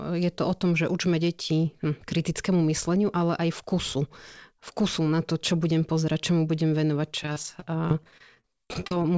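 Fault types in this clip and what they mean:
repeated packet loss (robotic sound): packets kept going missing, each hole patched by extending prior sound, leaving choppy, robotic speech from 7.23 to 8.97 s, gaps up to 41 ms.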